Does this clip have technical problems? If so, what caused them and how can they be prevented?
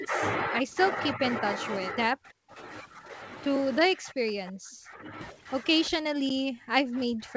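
Yes. Speech suppressed in double talk cuts into the speech at 1.14–1.22 s, 2.14–2.5 s, 3.84–4.3 s, 4.48–5.12 s, 5.89–5.94 s and from 6.11 s to the end. The short dips at 1.14 s and 5.89 s drop by around 10 dB. The others fall by roughly 35 to 40 dB, nearly silencing the talker. The likely cause is an echo canceller that mistook this speech for loudspeaker echo while both sides talked. Better double-talk detection in the canceller, or a headset, prevents this.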